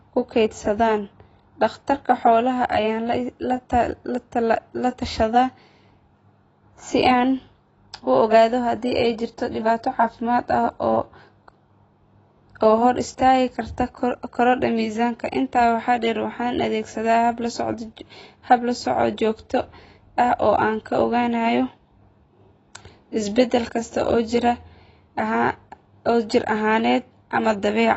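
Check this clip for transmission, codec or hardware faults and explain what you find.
One codec fault runs through the whole clip. Throughout, the speech sounds dull and smeared, with nothing above 8 kHz and a warbling, fizzy edge on sibilants. This is likely AAC compression at a low bitrate, around 24 kbps.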